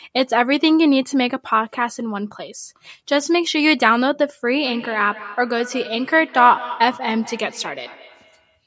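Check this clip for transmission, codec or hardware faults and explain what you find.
One fault is present. From 4.63 s to 8.61 s there is feedback echo between two devices: a second device replays the sound, the first device's microphone re-captures it, and the sound returns about every fifth of a second, peaking about 15 dB below the speech.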